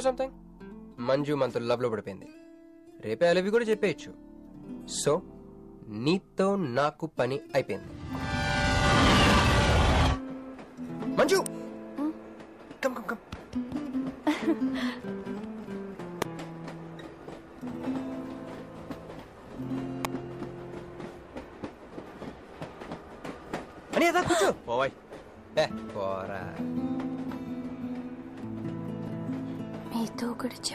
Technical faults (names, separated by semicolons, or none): electrical switching spike